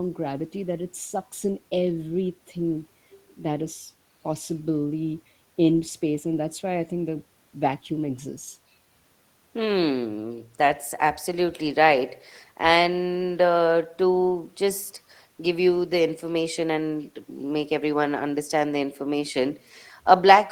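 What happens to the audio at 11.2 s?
Nothing goes wrong at 11.2 s: the speech continues intact there, with no dropout, click or distortion.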